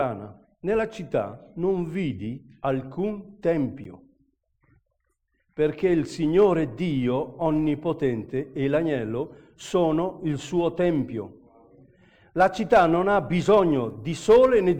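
At 3.84 to 3.87 s a corrupt frame was decoded: one compressed frame arrived with damaged bits, and the decoder played it anyway. Misread gains and codes placed energy at frequencies that don't belong there, producing a short chirp-like blip peaking around -25 dBFS. On a spectrogram it shows as a narrow vertical patch of stray energy about one frame wide. On the waveform it is a brief burst that doesn't follow the surrounding sound.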